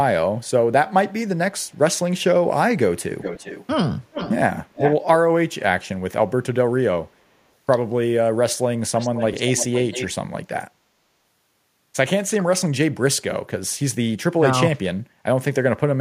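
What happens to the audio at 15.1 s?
From 15.01 to 15.23 s the speech dips slightly, a few decibels, in choppy patches: speech suppressed in double talk, likely an echo canceller ducking the talker during overlap.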